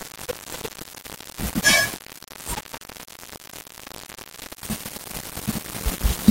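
From start to end, the speech carries low bit depth without dither. Every sample is rounded to very few levels, which fits a 5-bit signal. The likely cause is a reduction in word length with plain rounding and no added noise. The error tracks the waveform. It sits only a few decibels below the signal, so the grain is heavy. It gets rougher as the level falls. The quietest passages crackle or vanish between steps.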